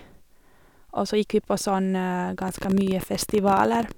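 A speech clip with a train of clicks from 2.42 to 3.92 s, about 18 per second, irregularly spaced, around 30 clicks near 5 dB above the signal, likely from electrical interference.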